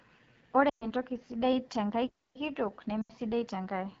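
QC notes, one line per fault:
Throughout: AMR wideband (HD Voice) codec. The speech has a rough, raspy texture, plainly audible across the clip. That grain fits the 8.85 kbit/s mode, one of the lowest AMR-WB rates, where the pulse-driven vocal tract model has too few bits to track the voice closely. The top band, 6.4 to 7 kHz, is synthesised from shaped noise rather than coded.
0.69 to 0.89 s and 3.01 to 3.12 s: lost AMR speech frames. At each point the speech drops quickly toward near silence, about 120 ms long at 0.69 s and about 80 ms at 3.01 s. When frames fail, the decoder repeats the last good pitch and vocal tract settings at falling gain. Wideband concealment fades quickly, so the gap drops toward silence before normal speech returns, briefly weak and rough.
2.07 to 2.36 s: playback stall. The audio stops in mid-flow for about 276 ms of silence, then continues. There is no smeared or fading concealment, only a clean cut to nothing. 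That points to the output running dry rather than to coding damage. The likely cause is the player starving for data or its thread being blocked until it could resume.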